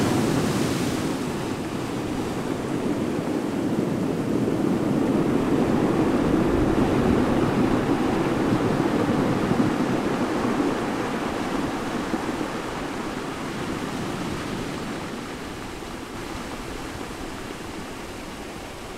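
A doubled audio track enters at 16.16 s and runs to the end of the clip. From that point a second, full-band copy of the sound plays about half a second behind the first, at roughly the same loudness, so every event is heard twice in a flat, mechanical repeat with no decay or room colour. The copy switches on abruptly rather than fading in, likely because the audio was picked up again through a slower path.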